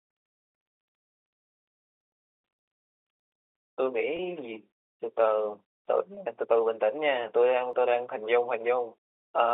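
Speech heard over a telephone-band path, with its energy held between about 300 Hz and 3.6 kHz, carries two brief dropouts from packet loss with pitch repetition, at 4.17–4.19 s and 6.15–6.17 s. Each time about 20 ms of audio went missing and the receiver filled the hole by repeating the last pitch cycle, giving a faint held buzz. On a waveform this shows as identical periods repeated; on a spectrogram, harmonics briefly frozen flat. At 7.73 s a very short piece, roughly 15 ms, is skipped outright, the sides butted together with no silence. That is audio missing between chunks, likely from the recorder switching buffers. A waveform shows an abrupt discontinuity; a spectrogram, a thin vertical broadband line.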